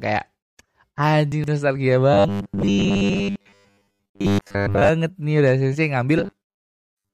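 Between 1.32 and 1.48 s the speech gets jumbled for a moment: chunks out of order. One 40 ms chunk turns up three chunks late and plays after the ones meant to follow it. Nothing's actually missing, but the shuffled order makes that stretch sound garbled, and there are three hard joins where the pieces meet.

From 2.14 to 4.89 s the voice turns into a stiff, metallic buzz pitched at 100 Hz. It still loosely tracks the speech underneath. That's robotic sound from repeated short buffers, and the likely cause is audio arriving too seldom, so the software keeps replaying the last bit instead. A 100 Hz buzz fits a loop of about 10 ms, and most of the real audio in that stretch is skipped rather than heard. The same buzz comes back at 6.19 s and runs right to the end.

Inside that first robotic stretch, from 2.61 to 2.63 s, there's a short chirpy blip. That's a corrupt frame decoded: a couple of compressed frames had flipped bits and got played anyway. 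The decoder read wrong gains or codes and dumped energy at the wrong frequencies for just the length of those frames, which is why it's such a brief squeak layered over the buzz.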